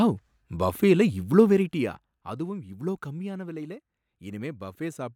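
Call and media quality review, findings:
Zipper noise, 1.34 to 2.50 s, ending just before "இவ்ளோ கம்மியான விலைல". Ticking rides on the speech as level falls about 15 dB. Gain applied in unsmoothed steps, around 20 per second, each a small click. Probable component: per-buffer gain stage.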